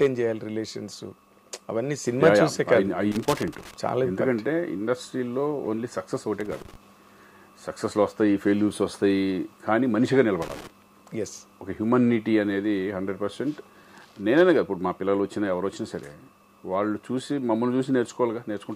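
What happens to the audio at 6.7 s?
At 6.7 s there is loose connector crackle, running from 6.40 to 6.76 s. A bad contact keeps breaking the signal, producing an irregular burst of scratchy crackle.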